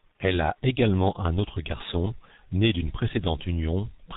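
Speech runs through a G.723.1 codec from start to finish, and the damage is heavy. Nothing above 4 kHz survives, so the sound is dull and muffled. The codec models the voice in 30 ms frames and updates that model slowly. That gives a hoarse, rough texture. Consonants smear into each other and lose their edges. The thinness points to a very low rate, around 6 kbit/s, typical of early internet telephony.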